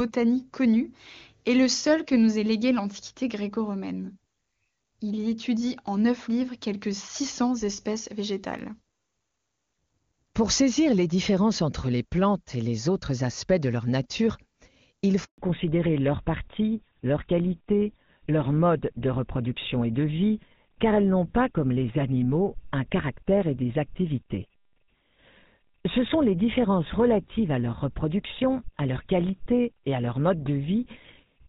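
At 15.24 s a handover gap opens. The call switches networks and no frames arrive, so the sound cuts out for 140 ms until 15.38 s. From 15.38 s to the end comes a fallback to narrowband. Earlier, wideband detail reached up to 7 kHz, fitting high-rate HD Voice. Now nothing above 4 kHz remains, and the sound turns dull and rough, pointing to an older GSM codec.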